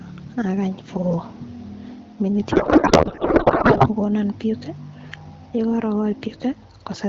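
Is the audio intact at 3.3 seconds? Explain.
No. From 2.51 to 3.88 s a codec payload misread turns the speech into garbled, warbling noise, because octet-aligned AMR frames are parsed as bandwidth-efficient. Gain pumping is also present: the gain swings by roughly 5 dB, likely from excessive gain driving a fast limiter.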